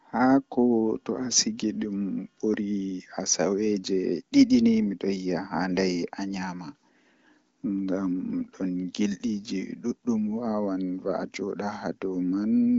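No technical faults can be heard in this speech recording, which comes through an AMR wideband (HD Voice) link with its usual top end near 7 kHz.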